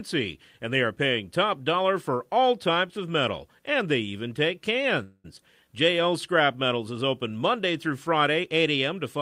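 At 5.03 s, just after "and they even take", the speech stalls in a call audio freeze lasting until 5.26 s. The last sound is stretched into a buzz or hiss that fades, filling about 208 ms. This fill ends in about 30 ms of silence. The speech resumes exactly where it stopped, with nothing lost. It arrives about 208 ms later than before. This is likely packets held up in transit, leaving the jitter buffer empty.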